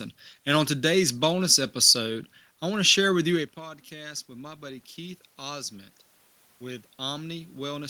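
At 3.56 s, just after "share with you a", the talker moves back from the microphone around 3.5 s, and the input falls by about 15 dB. Automatic gain rising follows. The gain control treats the level as too quiet and lifts its gain by about 4 dB over 3.56 to 5.78 s, so the voice and the room noise swell together. A second rise runs from 6.58 s to the end after another input drop of about 15 dB.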